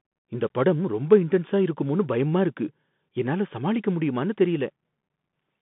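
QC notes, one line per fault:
Throughout: Bluetooth CVSD headset codec. The speech is squeezed into roughly 150 Hz to 3.6 kHz, so it has that thin, boxy headset sound. The codec damage is plainly audible: a granular hiss sits under everything, s sounds come out scratchy, and louder bright bits smear because the encoder sends only an up-or-down bit per sample with an adapting step that can't keep pace. It sounds like the 64 kbps CVSD link that headsets use.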